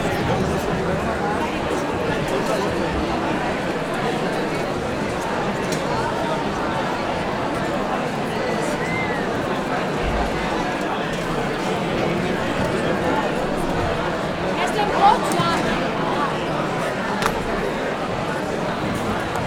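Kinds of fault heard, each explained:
Train of clicks: from 11.41 s to the end at 19.45 s, around a hundred similar-shaped pulses tick over the sound at about 11.5 per second, unevenly spaced and peaking a little above the sound itself, likely from interference or a faulty connection.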